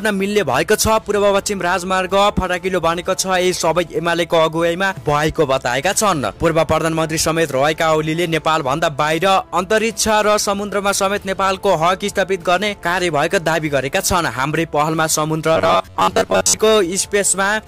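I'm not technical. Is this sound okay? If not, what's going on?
No. From about 15.56 to 16.59 seconds the sound turns into a flat, metallic buzz with a fixed low pitch of around 94 Hz. This is robotic sound from repeated short buffers. The likely cause is new audio arriving too slowly, so the software fills the gaps by replaying a tiny slice, about 11 milliseconds long, over and over. That repeated slice covers most of this stretch, and the real audio in between is skipped.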